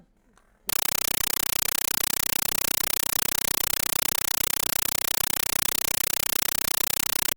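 A speech clip that gives way at 0.69 s to very loud, chattering static lasting to the end, pulsing about 31 times a second in 8 ms bursts. This is a compressed stream played as audio: an undecoded AC-3 bitstream, sent as ordinary samples.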